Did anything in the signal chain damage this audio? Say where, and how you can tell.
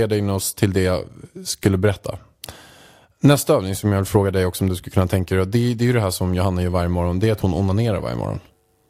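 No, nothing in this speech recording stood out on listening as a sign of damage at any stage of the chain.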